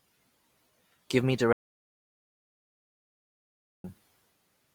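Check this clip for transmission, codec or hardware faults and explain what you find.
There's one clear fault: an audio dropout to silence from 1.53 to 3.84 s. The input most likely got cut off or muted while the recorder kept writing silence, so the speech stops dead and about 2.31 s of dead-flat silence follows, with no room tone at all.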